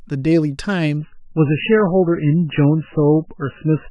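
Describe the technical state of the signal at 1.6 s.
At 1.6 s the speech is in an adaptive stream at a lower bitrate, a stretch running from 0.97 s to the end. The connection stepped down abruptly and without a gap, leaving dull, watery audio that fits roughly 8 kbit/s MP3. A spectrogram shows nothing above 3 kHz.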